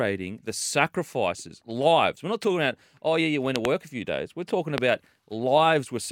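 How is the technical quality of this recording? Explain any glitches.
Two loud pops interrupt an otherwise continuous speech track. From 3.56 to 3.67 s, between "oh yeah you went" and "a few days", a sharp double pop jumps out far above the speech, and a single pop follows from 4.78 to 4.80 s. The speech carries on underneath both. Each is likely a brief voltage spike, from a plug, switch, static discharge or driver glitch, that was added to the signal and then shaped by the circuitry downstream.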